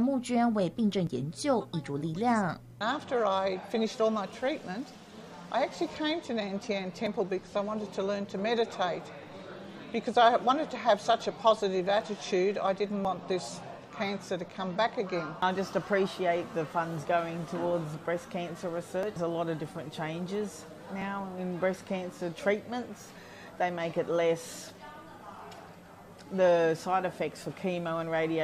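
The audio has small skips at 1.07, 7.07, 13.05, 19.03, 21.02 and 23.0 s. Each is a tiny skip where roughly 10 to 16 ms of sound is missing and the waveform jumps. This is overlap between stream segments. The gaps fall on the boundaries of 2-second segments, where adjacent timestamps overlap. The player trims the overlap even though the audio was not doubled. So a sliver of real sound is lost at each join.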